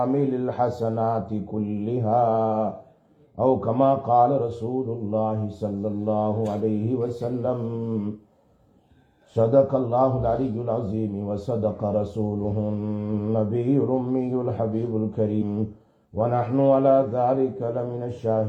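Compressed frames skipped at 15.38 to 15.42 s: several whole frames never decode, so roughly 0.4 s of audio vanishes and the sound jumps ahead.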